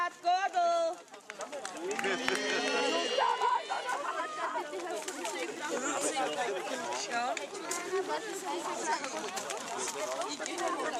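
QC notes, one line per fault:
Nothing stood out on listening.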